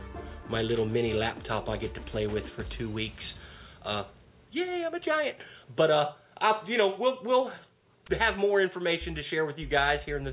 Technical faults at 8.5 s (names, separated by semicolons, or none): none